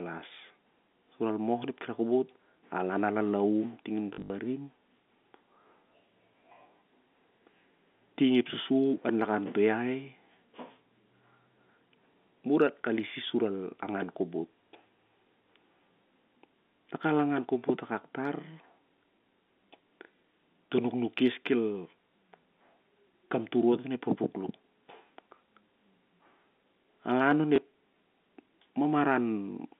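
At 4.14 to 4.3 s, packet loss with the last packet repeated removes about 120 ms of audio scattered across 160 ms, with the longest gap 60 ms. Each gap is filled by replaying the previous packet. The result is a brief robotic buzz, which fits 20 ms packets. A single 20 ms repeat at 27.56 to 27.58 s gives a small blip. The G.711 telephone band stays intact throughout.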